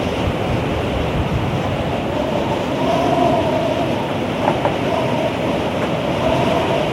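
A recording of everyday sounds, with nothing technically wrong with it.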